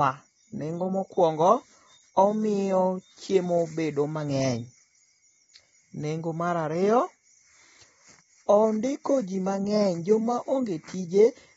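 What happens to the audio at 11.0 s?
At 11.0 s the speech sounds dull and smeared, with nothing above 7.6 kHz. This runs throughout the clip, likely AAC compression at a low bitrate, around 24 kbps.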